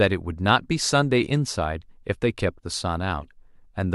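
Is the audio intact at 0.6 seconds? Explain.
Yes, the speech at 0.6 seconds is intact, with no dropout, click, distortion or other fault at that moment.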